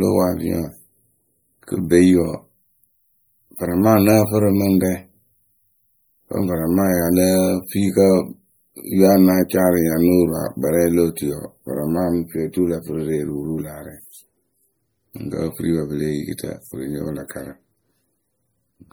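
MP3 compression runs throughout this speech clip: plainly audible watery swirl, likely from a low-bitrate encode, fitting roughly 48 kbps, zeroing weak frequency lines.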